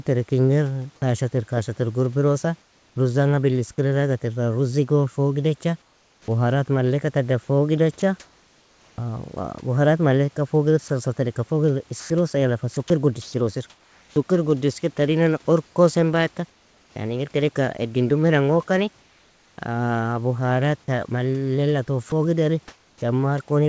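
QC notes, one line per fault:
2.62–2.96 s, comfort noise in place of the background: the real room noise gives way to steady, featureless hiss, about 3 dB quieter, likely from discontinuous transmission during the pause.
5.82–16.96 s, sound chopped by the voice detector: quiet stretches, about 2.6 s in total, drop out and are filled with synthetic noise. The likely cause is the detector toggling repeatedly.
19.00–19.58 s, comfort noise in place of the background: right after "edin dumiran gokani", the background flattens into smooth, about 3 dB quieter noise, likely generated by the receiver.
22.10–23.02 s, sound chopped by the voice detector: about 0.36 s of quiet sound is cut and filled, likely by the detector switching off mid-stretch.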